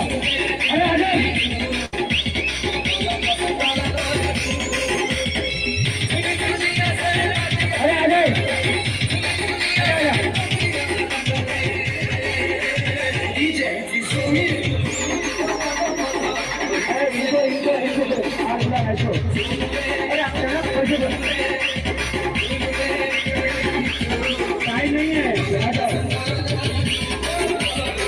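A burst of packet loss hits this audio from 1.85 to 1.94 s. A short run of consecutive packets never arrived in time, so the receiver covered the hole by stretching the last sound it had, holding it for about 72 ms while letting it fade. When fresh packets arrive, playback jumps ahead, and roughly 70 ms of the original sound is simply gone rather than delayed.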